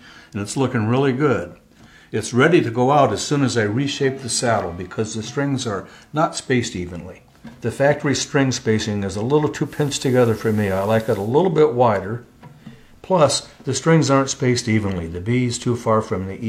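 Digital radio blending to analogue occurs from 9.62 s to 11.34 s. The receiver lost its digital stream and cross-faded over about 128 ms to the station's FM broadcast, then faded back at 11.34 s. During that stretch a layer of hiss sits underneath, roughly 30 dB below the programme, and the overall level shifts by about 1 dB as the analogue path takes over.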